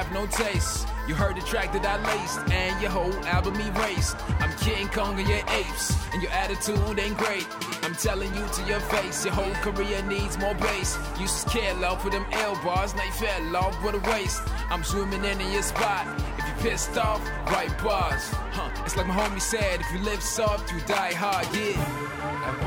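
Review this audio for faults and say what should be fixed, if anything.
There's a regular click every 1.17 s, running from 1.21 s to 22.20 s, around twenty in all. That steady spacing likely comes from clock drift buffer slips: two devices on separate clocks, a few hundred ppm apart, so the buffer dropping or repeating a small block of samples each time. Locking both devices to one shared word clock, or adding asynchronous sample-rate conversion between them, would stop it.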